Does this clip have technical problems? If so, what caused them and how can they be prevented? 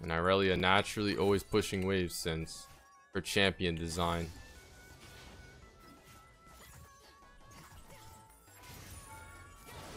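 Yes. Chunks out of order at 0.56–0.60 s: a 20 ms chunk plays one slot late, causing a brief jumble. Reorder chunks by sequence number before playback.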